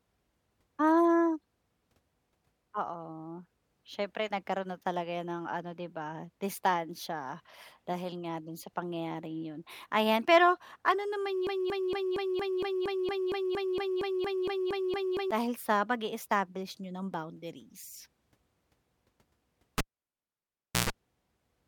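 From 11.47 to 15.31 s, a 0.23 s fragment of speech stutters back to back seventeen times, like a broken-record loop, and whatever should have been heard there is gone. The likely cause is a stalled player, encoder or stream that kept resending its last buffered fragment.

At 19.78 s a pop cuts the sound to near silence for about 1.07 s, broken by a 0.13 s burst of 60 Hz mains buzz, and a second pop marks the return at 20.90 s. This is a live cable pulled and plugged in: the buzz is the plug tip touching before it seats.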